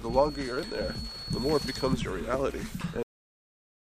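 From the start to 2.0 s, a thin, steady whistle sits at 4.4 kHz behind the sound, roughly 15 dB below the main signal and swelling and fading slowly in level. This is a feedback whistle. The likely cause is a loudspeaker-to-microphone path held just at the edge of instability, so a single high frequency keeps ringing without building into a runaway howl. It stops at 2.0 s.

At 3.03 s the audio hits a cut-off end. The sound stops mid-event and falls straight to digital silence, with no decay or tail, and stays silent to the end. The final stretch of audio was never written out or played back, so the stream ends abruptly in the middle of the material rather than fading or finishing naturally.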